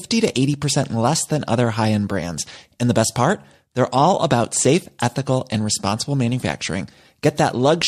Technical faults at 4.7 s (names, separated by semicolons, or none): none